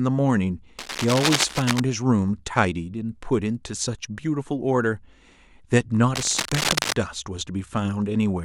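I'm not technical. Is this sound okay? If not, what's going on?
No. Twice, a rough scratching, rustling noise cuts across the speech: from about 0.78 to 1.80 seconds, and again from 6.15 to 6.93 seconds. It is loud, sitting almost level with the speech. This is cable scratch noise, likely from a worn cable, plug or knob being moved. When the worn contact shifts, the electrical connection flickers rapidly, and those flickers turn into bursts of crackly noise laid over the sound.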